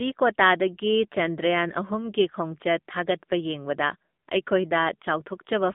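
Throughout, the speech carries plainly audible AMR narrowband mobile codec damage. Sparse pulses driving a vocal-tract model leave a buzzy, synthetic edge, which fits a rate near 8 kbps. A spectrogram shows energy held between 200 Hz and 3.6 kHz, and nothing above 3.8 kHz.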